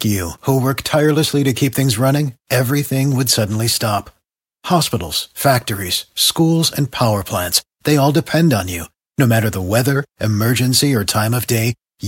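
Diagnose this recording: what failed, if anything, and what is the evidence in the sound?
Nothing stood out on listening to this speech recording that would point to a failure at any stage of the chain.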